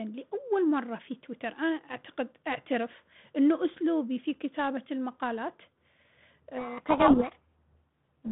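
From 6.58 s to the end, a codec payload misread buries the speech in harsh distortion: the 32 kbit/s G.726 code words are read in the wrong bit order, so each adaptive-prediction step is wrong. Spectrograms show dense noise across 150 Hz–3.6 kHz; the waveform turns ragged.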